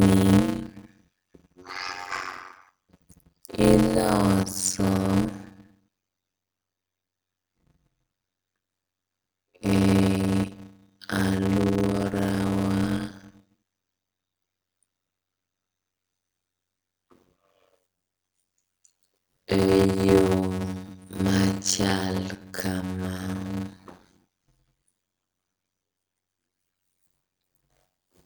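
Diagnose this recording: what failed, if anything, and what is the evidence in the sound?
Block size mismatch (padded) in the buffer stage. A 92 Hz buzz runs throughout. Speech plays at 0.53 speed, timbre intact. This fits zero-padded 256-sample blocks.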